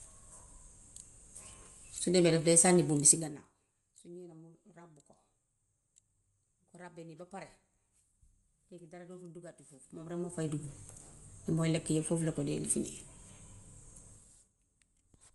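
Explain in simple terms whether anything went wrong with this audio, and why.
Throughout the speech there's a breathy, grainy edge with nothing above about 11.6 kHz, likely caused by heavy Bluetooth LC3 compression squeezing the sound into small chunks.

Right after "bul bi", from 3.08 to 3.52 s, a fast ticking rides on the sound as it gets quieter. That's zipper noise: the volume drops in about 30 tiny jumps per second, not in one smooth glide, and each jump clicks.

The same zipper noise returns from 9.68 to 10.64 s, just after "dara dootul duggati", this time while the volume climbs back up in small clicking steps.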